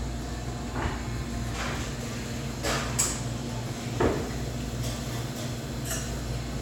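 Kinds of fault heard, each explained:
No technical faults can be heard in this recording of sounds.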